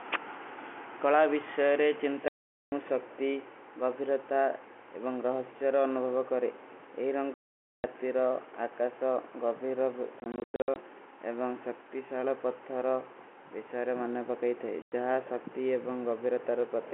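Packet loss filled with silence opens hard-edged holes at 2.28–2.72 s after "କଲା ଵିଶ୍ଵେରେ", at 7.34–7.84 s, in scattered bursts across 10.2–10.76 s, and at 14.82–14.92 s before "ଜହା ସକ୍ତୀ". Lost packets were replaced with silence, and gap lengths in 20 ms steps fit 20 ms packets in this telephone-band G.711 audio.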